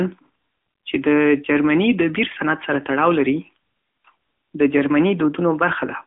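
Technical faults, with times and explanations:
Throughout, AMR narrowband mobile codec: band-limited to about 200 Hz–3.4 kHz, nothing above 3.7 kHz on the spectrogram; a 10.2 kbps vocal-tract model leaves speech audibly buzzy and synthetic.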